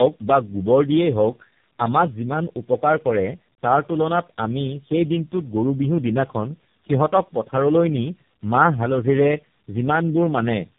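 Tandem speech coding throughout: the speech sounds rough, muffled and warbly, with nothing above 3.7 kHz, consistent with four speech codecs in a row, likely ending in AMR-NB.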